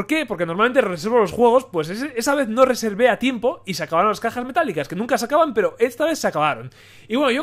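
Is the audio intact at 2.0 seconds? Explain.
Yes, at 2.0 seconds the audio plays through cleanly, with no dropout, click, distortion or other fault at that moment.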